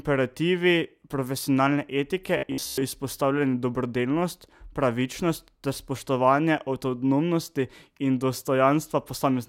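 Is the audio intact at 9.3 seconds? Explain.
Yes, the speech is intact at 9.3 seconds, with no audible fault at that moment.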